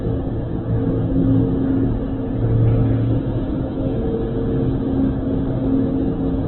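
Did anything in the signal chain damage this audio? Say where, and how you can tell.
Yes. Opus compression damages the whole clip at the codec stage: nothing survives above 4.1 kHz, and tones come out heavily rough, grainy and noisy. That points to music-mode Opus likely starved near 8 kbps, narrowing bandwidth and filling bands with folded or noise energy.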